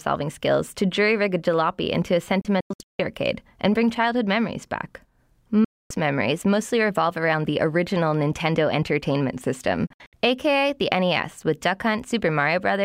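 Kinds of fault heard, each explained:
Digital broadcast dropout: the speech mutes abruptly, with only a few milliseconds of fade, then picks up again later, with nothing of what was said in between. Around 2.4 s it breaks into scattered holes over roughly half a second, the longest 160 ms. Near 5.6 s a single gap lasts about a quarter second, and near 9.9 s brief holes spread over 256 ms. The receiver lost the digital stream or rejected corrupted frames, so it went silent until clean frames returned.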